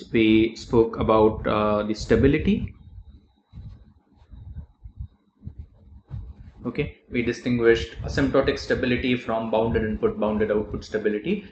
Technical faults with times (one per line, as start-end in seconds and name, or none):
none